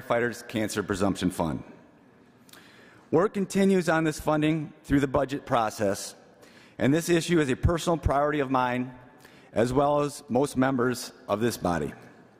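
No faults are audible anywhere in the clip.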